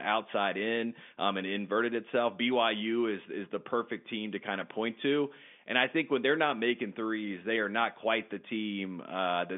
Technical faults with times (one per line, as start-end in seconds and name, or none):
none